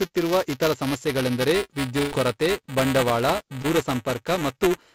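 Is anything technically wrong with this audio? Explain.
Yes. Three faults are audible in this speech, heard through a G.722 call path that carries nothing above 8 kHz.

Buffer tearing runs through the whole clip as a steady robotic buzz at about 345 Hz, which fits a 128-sample buffer. The writing and reading sides of the ring buffer have drifted, so each period contains a small slice of audio roughly 10 ms old, with hard joins on both sides. Unlike packet loss, it never stops while speech is present.

A burst of packet loss runs from 2.00 to 2.14 s, right after "ಇತರ ಸಮಸ್ಯೆಗಳೆಂದರೆ". About 120 ms of audio never arrived. The receiver filled the gap by continuing the last sound and fading it out, so it comes across as a held buzz or fading hiss with no true silence. Speech then picks up at "ಕೊರತೆ ಬಂಡವಾಳ" with the missing stretch skipped. It is a single long dropout, which sets it apart from the constant buzz.

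Short concealed packet loss occurs at 3.62 to 3.66 s, just after "ಕೊರತೆ ಬಂಡವಾಳ". Only about 20 ms was lost and concealed with a brief synthesized continuation before blending back into the real audio. It is heard as a quick smear or wobble rather than a held buzz, and it is far shorter than the burst at 2 s.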